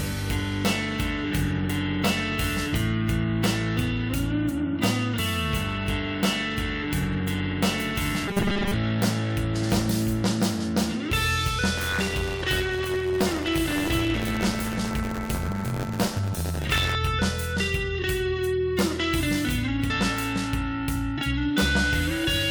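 From 8.28 to 8.74 s the sound turns into a rigid, metallic buzz fixed at 200 Hz. This is robotic sound from repeated short buffers. A 5 ms stretch is likely being replayed over and over while the real audio is skipped. Most of this span is repeats.

From 11.77 to 16.96 s there is buffer tearing. The writing and reading positions in the ring buffer cross once every period. A small slice of each period holds stale audio from about 20 ms earlier, with hard joins on both sides. This gives a steady buzzing rattle at 93.8 Hz, which fits a 512-sample buffer. It sounds only while signal is present.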